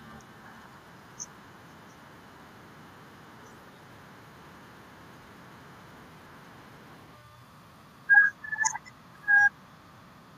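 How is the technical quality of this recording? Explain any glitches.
One short glitch stands out. From 8.85 to 8.91 s there is an echo leak: a very faint copy of the speech, about 30 dB down and trailing by about 0.2 s. It likely comes from a loudspeaker echo canceller letting residue through. On a spectrogram it shows as a weak, delayed ghost of the speech harmonics.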